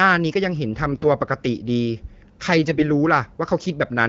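Speech carried over AMR wideband (HD Voice), whose light coding points to a mid rate around 12.65 kbit/s, breaks up twice with AMR bit errors, from 0.92 to 1.05 s and from 2.68 to 2.83 s. Flipped low-priority bits displace the excitation pulses and skew the fine pitch, gain and spectral values, so pitch and loudness hold while the sound turns hoarse and gargly, worse in the first burst. Lost frames would instead bring dropouts or smeared repeats.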